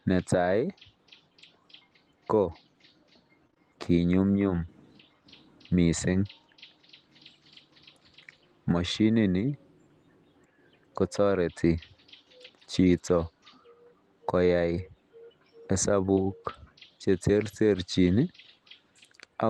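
Short concealed packet loss strikes at 3.47, 3.51 and 3.54 s, then at 16.14 s. Each time about 20 ms of speech went missing, and the receiver patched the hole by extending the preceding sound, so you hear a brief smear or wobble, never the dead silence of a plain dropout.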